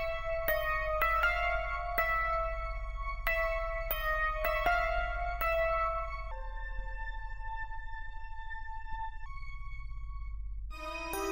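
Section at the wrong speed, 6.31 to 9.26 s: the sound plays at about 0.8 times speed, dropping roughly four semitones and dragging, likely from a clock mismatch during playback or editing.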